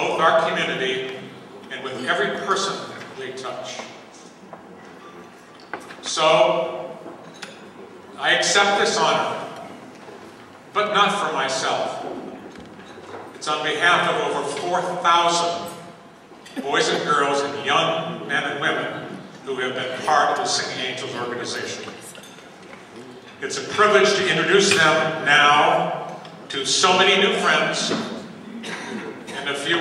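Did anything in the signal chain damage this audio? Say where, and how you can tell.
No, nothing in the signal chain damaged this audio that I can hear.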